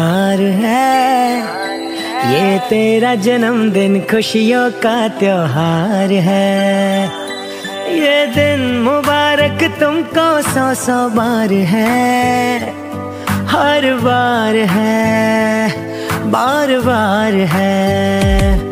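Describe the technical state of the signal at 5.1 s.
At 5.1 s the signal is intact, with no technical fault to be heard at that point.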